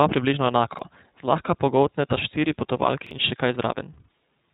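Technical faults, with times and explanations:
Throughout, iLBC codec: the whole recording is band-limited, with nothing above 3.8 kHz, so sibilants and consonant edges lack air and the speech sounds narrow and telephone-like. The damage is plainly audible as a rough, slightly synthetic grain on every syllable. iLBC codes each frame's excitation independently, with no help from the previous frame. That coarse per-frame modelling causes the roughness, and the character fits the 30 ms frame, 13.3 kbps mode.
0.74–0.79 s and 3.07–3.11 s, repeated buffer: twice, a 46 ms slice of audio plays a second time, with a hard join at the splice. It is heard as a brief stutter, first just before "zlahka pogoltneta štiri" and again just after "zlahka pogoltneta štiri". New data missed its deadline, so the output device replayed the last block it held. The length fits a 2048-sample buffer, and about 50 ms of real audio is lost at each event.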